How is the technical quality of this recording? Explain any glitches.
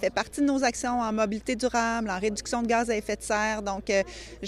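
No glitches can be heard in this recording. Nothing in it calls for an explanation.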